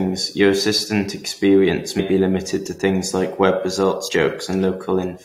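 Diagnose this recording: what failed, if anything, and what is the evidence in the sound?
The speech jumps forward twice: at about 1.98 s, just before "be limited to things", roughly a tenth of a second of audio goes missing, and at about 4.07 s, right after "to things like web", about 70 ms vanishes. This is compressed frames skipped at the codec stage. Whole frames were missing from the file or rejected as damaged by the decoder.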